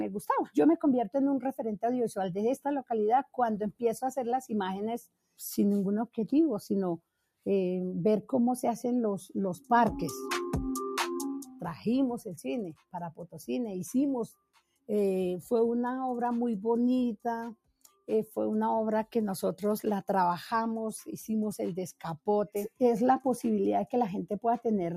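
Throughout, a noise suppressor applied to music or sounds keeps misreading steady sound as noise. Level swings by about 5 dB, so held tones pump and thin.

The suppressor also cuts sound at 5.06, 6.99, 12.75, 14.33, 17.55 and 21.93 s. Each dip reaches about 20 dB down, swallowing sustained tails.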